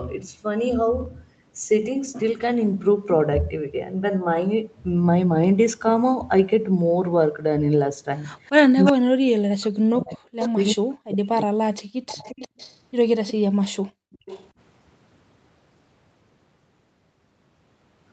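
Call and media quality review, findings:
Echo leak: delayed copies of the far talker's speech returning at 8.85, 10.1, 10.41, 12.08–12.8, 13.27 and 14.12–14.48 s. Lag is steady near 350 ms, drifting slightly later, 346 to 356 ms. Level varies, from about 5 dB below the speech at 8.85 s to about 35 dB below at 10.1 s, half near 20 dB down. Likely cause: a loudspeaker endpoint whose echo canceller leaves residual echo uncancelled and sends it back.

Speech suppressed in double talk: the near talker's speech dips and drops out in pieces from 8.92 to 12.26 s, deepest near 40 dB, about 3 s affected in total. Likely cause: the echo canceller cannot separate near speech from loudspeaker echo during overlap and attenuates both.

Background gated by the echo canceller: room tone ducks out from 13.9 to 14.21 s, about 40 dB down for roughly 0.3 s, then returns. The canceller clamps the microphone hard while the loudspeaker plays and releases afterward.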